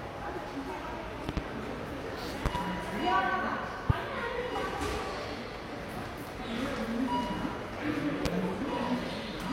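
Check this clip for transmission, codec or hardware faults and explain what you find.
Four loud-pop events: double pops at 1.29–1.40 s and 2.46–2.58 s, single pops at 3.90–3.93 s and 8.26–8.28 s. Each is a sharp thump roughly 20 to 25 dB above the sound, likely from a plug, switch or static voltage pulse.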